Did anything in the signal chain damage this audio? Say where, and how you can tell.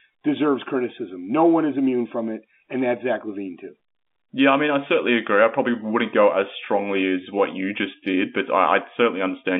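No, no damage found.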